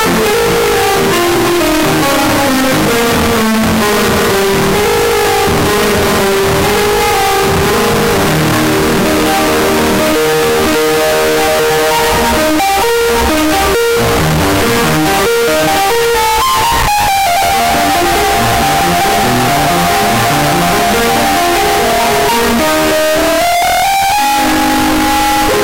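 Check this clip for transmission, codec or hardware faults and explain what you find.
One fault runs through the whole music clip: float read as integer. The 32-bit float samples were likely read as 32-bit integers, so each value is set by the sign and exponent bits. The waveform becomes nearly square at an almost fixed, high level, very loud and harsh, with background noise as loud as the music.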